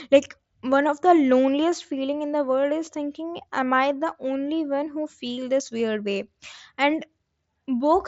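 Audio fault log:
2.86 s and 5.79 s: concealed Bluetooth headset packet loss. Each 7.5 ms gap, consistent with a single lost packet, is filled with copied recent waveform, so it is barely audible.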